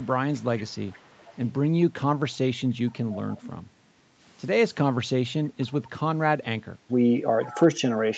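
From 0.33 to 1.53 s, 3.31 to 3.51 s and 7.43 to 7.6 s, an echo leak adds a faint copy of the speech 470 ms late, likely a loudspeaker echo canceller passing residue. On a spectrogram, the harmonic pattern repeats, weaker, 470 ms later.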